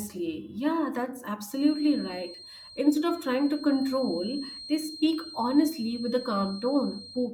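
A speech recording with a feedback whistle: from 1.47 s to the end at 7.34 s, a thin, steady tone at 4.2 kHz sits roughly 15 dB below the speech, swelling and fading slowly in level. This is likely a loudspeaker-to-microphone loop held just at the edge of feedback, sustaining one frequency without growing.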